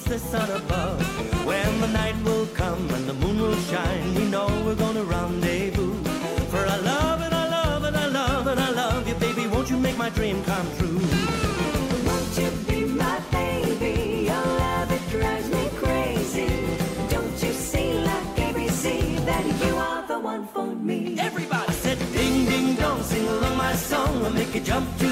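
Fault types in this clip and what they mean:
Loud pop: a brief electrical pulse, likely from a plug, switch, static discharge or driver glitch, is added to the signal path. It is heard as a single sharp pop at 18.68 to 18.71 s, roughly 10 dB above the surrounding sound, which continues underneath.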